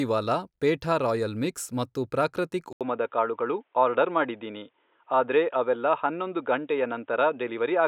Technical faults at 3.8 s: input switched to a poorer device

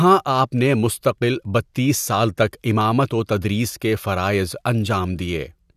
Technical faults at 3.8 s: none

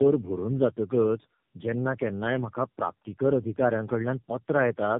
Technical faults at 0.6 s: tandem speech coding

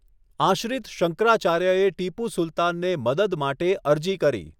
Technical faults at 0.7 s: none

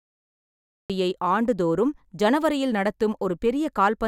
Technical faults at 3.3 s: none

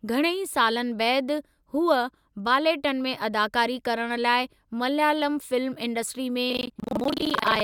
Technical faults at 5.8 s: none

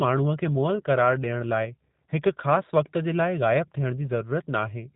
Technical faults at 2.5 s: G.729 codec

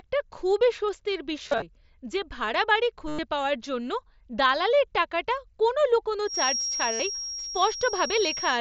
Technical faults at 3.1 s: concealed Bluetooth headset packet loss

